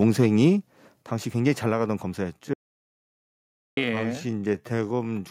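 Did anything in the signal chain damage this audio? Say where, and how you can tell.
Yes. Microphone overload, 0.02 to 0.45 s: peaks run about 2 dB past the converter's limit, flattening around one percent of samples into harsh crackle, likely from excessive preamp gain at the converter.

Microphone volume stepped down at 1.02 s (about 5 dB) and 2.04 s (about 2 dB): abrupt level drops, likely call-processing gain control cutting input volume.

Time-stretched section, 2.31 s to the end: pace slows to about 0.55 times while pitch holds, likely software stretching to fit a length.

Audio dropout to silence, 2.54 to 3.77 s: 1.24 s of silence without room tone, likely lost input upstream while the recorder kept writing.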